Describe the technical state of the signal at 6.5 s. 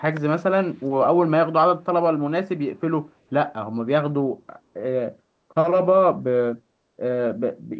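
At 6.5 s the speech is intact, with no dropout, distortion or glitch, only the expected band limit of the call path, with nothing above 8 kHz.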